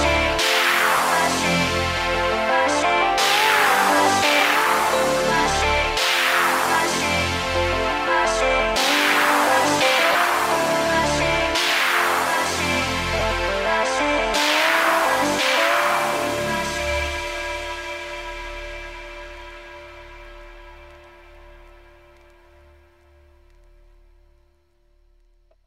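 Lost LE Audio frames cause three brief gaps: at 0.97 to 0.99 s, 10.12 to 10.15 s and 13.19 to 13.21 s, lasting about 20, 30 and 20 ms, which fits two or three 10 ms frames each time. The LC3 decoder fills each gap by repeating the last spectrum with randomised signs, so tonal content turns into a short noisy smear. On a spectrogram, sharp harmonics give way to a diffuse, grainy block. The waveform keeps its level but loses its regular shape.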